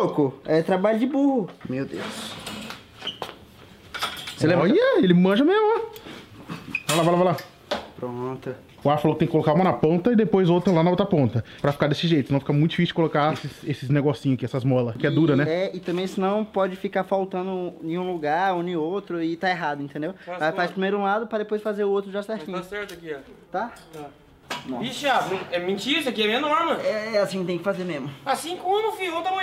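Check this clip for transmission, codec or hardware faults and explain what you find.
One fault, from 23.54 s to the end: the resampler restarted on every block, each 20 ms block converted from 48 kHz to 44.1 kHz separately. The edge errors buzz at 50 Hz, only with signal, unlike steady mains hum.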